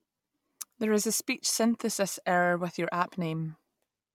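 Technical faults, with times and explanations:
No technical faults can be heard, and the signal stays steady and continuous over the whole recording.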